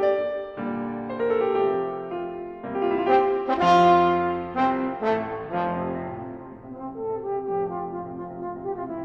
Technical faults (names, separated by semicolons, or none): none